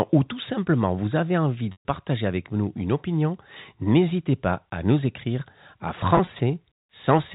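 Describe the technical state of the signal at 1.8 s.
Packet loss with pitch repetition runs from 1.72 to 1.85 s, after "simplement vous avez envie". About 130 ms is lost; the last pitch period repeats, fades to silence, then cross-fades into "avec nous une opinion".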